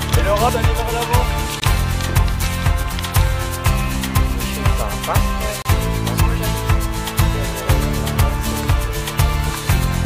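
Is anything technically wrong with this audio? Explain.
Yes. The audio was encoded in separate pieces and joined without trimming, leaving a gap at each join of encoded pieces. Each encoder run's start-up delay and its padded last frame stayed in, so silence sits between pieces. This happens at 1.60 to 1.62 s, a 20 ms gap, and at 5.62 to 5.65 s, a 32 ms gap, four seconds apart. Each sounds like a brief dropout with softened edges, after which the sound resumes where it stopped.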